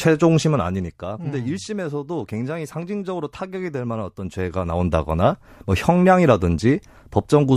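From 0.37 to 1.12 s the level falls by roughly 10 dB, and from 4.18 to 5.02 s it rises by roughly the same amount. Both moves show zipper noise: the gain jumps in 2 dB steps, around seven a second, with no smoothing between them, so each jump leaves a click that ticks over the speech. On a waveform the envelope forms a staircase, and a spectrogram shows thin vertical broadband lines at each step.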